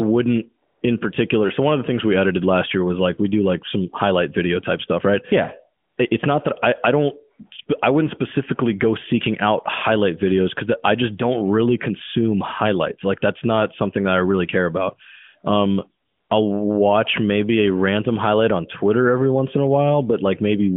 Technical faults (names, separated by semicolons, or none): AMR comfort noise